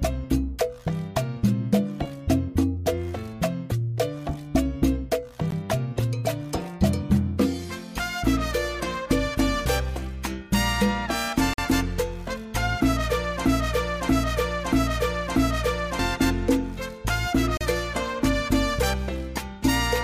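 Misaligned time stamps between consecutive stream segments, which are 6 s long, leave small holes that the player fills with silence. These gaps between stream segments cut the audio with hard edges at 5.51 s (about 17 ms), from 11.54 to 11.58 s (about 47 ms) and from 17.57 to 17.61 s (35 ms). They fall at roughly 6 s intervals, matching the segment boundaries. They add time but remove nothing. Between 13.45 and 15.99 s the player, encoder or stream likely stalled and kept resending the last fragment it held, producing a broken-record loop. A 635 ms piece of sound plays four times back to back, exactly identical each time, and whatever should have been heard during those 2.5 s is lost.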